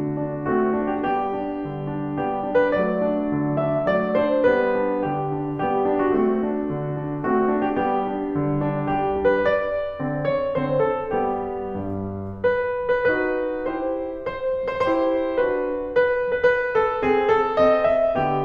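No technical faults are audible.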